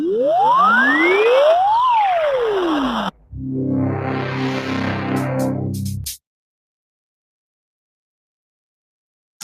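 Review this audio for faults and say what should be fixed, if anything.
A noise suppressor tuned for speech is applied to non-speech sound throughout. It treats sustained and decaying content as noise and keeps adjusting its gain against it, so the level swings by roughly 5 dB. Transients pass largely intact while held material and tails are pulled down, which leaves the sound unsteady and somewhat thinned.

Sound is cut by the noise suppressor in two places. From 3.11 to 3.35 s it misreads the material as noise and drops it by up to about 18 dB, affecting around a fifth of a second. From 5.92 to 6.20 s the same happens with a shallower cut of about 11 dB over roughly 150 ms.

Disable speech-oriented noise suppression, or switch it to a music or bypass mode, whenever the source is not speech.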